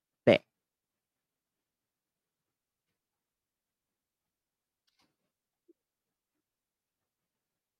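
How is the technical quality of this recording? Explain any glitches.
The technical quality of the recording is sound, with no glitches to explain.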